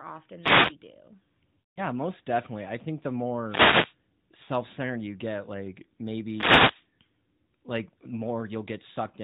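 From 0.40 to 0.76 s, a wireless microphone noise hit swishes in as the radio signal fades.

From 1.60 to 1.81 s, just before "most definitely i think", lost AMR speech frames make the decoder repeat old settings. The sound smears and fades out over about 160 ms, which fits eight lost frames.

Static bursts again from 3.42 to 3.96 s, after "definitely i think the".

At 4.44 to 4.50 s, a brief 40 ms dip fits two lost frames.

A last noise hit runs from 6.22 to 6.88 s, after "you get like".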